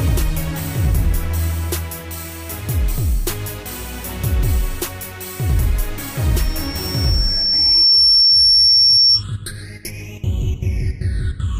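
A loudspeaker feedback squeal appears at 6.37 s: a single 5.4 kHz tone swells over roughly a second and a half to about 10 dB above the audio, then stops at 9.24 s, as the microphone-to-loudspeaker loop exceeded unity gain there.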